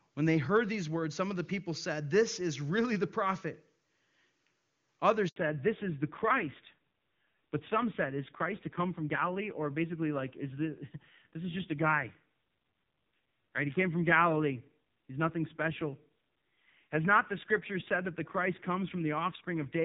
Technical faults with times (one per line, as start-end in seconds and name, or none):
5.28-5.36 handover gap
5.36-19.84 fallback to narrowband